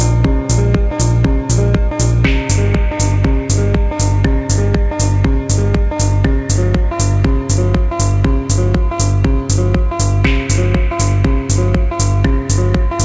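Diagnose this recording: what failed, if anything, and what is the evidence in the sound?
Nothing failed: the sound arrives intact through the call path, band-limited with nothing above 8 kHz, which fits a wideband call codec such as G.722.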